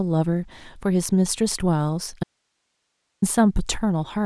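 At 2.24 s the speech cuts out abruptly. It returns just as suddenly at 3.22 s. This is an audio dropout to a faint residue, lasting close to one second. The gap is not silent. It holds only a thin hiss, roughly 55 dB below the speech. The change is too sharp for a pause or a fade. The likely cause is a brief loss of the incoming signal while the path after the break stayed live.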